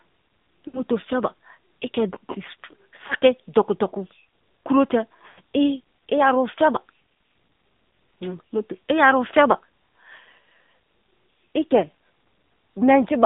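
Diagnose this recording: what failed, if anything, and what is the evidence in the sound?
The codec stage is the culprit: an AMR narrowband mobile codec squeezes the speech into roughly 150 Hz to 3.7 kHz, and its buzzy, synthetic texture fits a low rate of about 7.4 kbps.

Lost AMR speech frames over the radio link cause smeared, fading dropouts at 0.68–0.81 s before "feba i", 3.08–3.13 s, and 5.28–5.40 s after "kuro te". The decoder stretched the last good frame, which fits three, one and five missing 20 ms frames.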